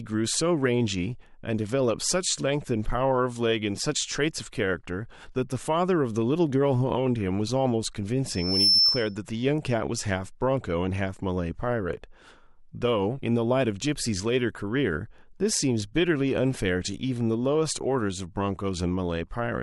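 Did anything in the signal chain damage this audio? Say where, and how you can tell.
Yes. Loudspeaker feedback squeal runs from 8.28 to 9.16 s: a single tone at 5.3 kHz rises out of the speech, swelling over roughly 0.4 s until it sits around 10 dB above the talker. The damage happens at the acoustic and analogue stage, where the microphone is picking up the loudspeaker it feeds. At 5.3 kHz the loop gain exceeds one, so that frequency keeps amplifying itself until the loop is broken.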